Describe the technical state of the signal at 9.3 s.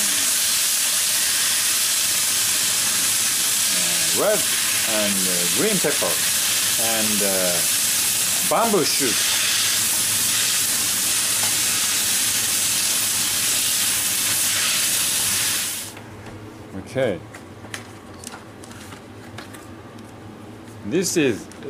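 At 9.29 s a sharp click is heard, likely dropped samples: roughly one sample missing makes the waveform step abruptly, drawing a thin vertical line across the spectrogram.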